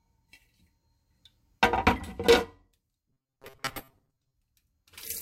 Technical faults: robotic sound from repeated short buffers

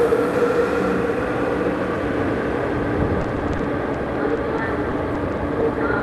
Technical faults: repeated packet loss (robotic sound); short concealed packet loss

